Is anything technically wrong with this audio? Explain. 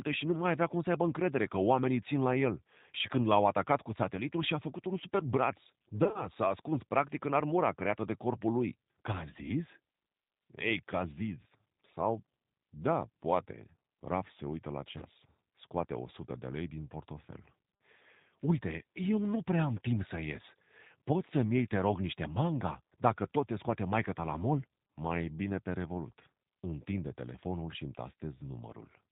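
Yes, this speech clip has two problems.

Throughout, the speech sounds rough, slightly synthetic and plainly band-limited, with nothing above 4 kHz. That fits the G.729 codec at 8 kbit/s. The decoder rebuilds each 10 ms frame from a vocal-tract filter, a pitch predictor and a handful of pulses instead of the original waveform, so the fine detail is lost and the speech takes on a rough, artificial edge.

Two short dropouts show VoIP packet loss concealed by the speech codec. From about 6.04 to 6.26 s the sound smears into a brief, fading buzz or coloured noise, with about 70 ms missing in bursts spread over roughly 100 ms. The longest gap is 30 ms. At 14.98 to 15.04 s, 30 ms of lost audio does the same. In both places the decoder stretched its last pitch and filter across the missing frames while lowering the gain. Because each frame depends on the one before, the speech stays weak or distorted for a moment after the audio returns.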